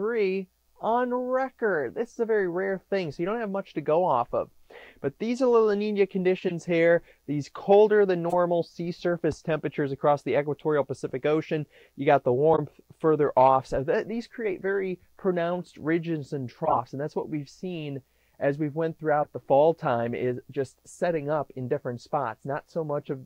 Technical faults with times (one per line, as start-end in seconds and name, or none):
6.39-6.52 corrupt frame decoded
8.30-8.34 corrupt frame decoded
12.52-12.59 corrupt frame decoded
16.65-16.79 corrupt frame decoded
19.22-19.26 corrupt frame decoded